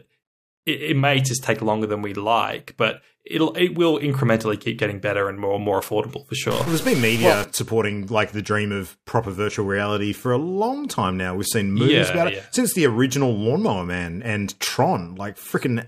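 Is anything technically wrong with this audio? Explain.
Yes. From 6.51 to 7.44 s the sound turns harsh and buzzy, likely from a stuck bit. Each affected sample shifts by a fixed step, around -25 dBFS.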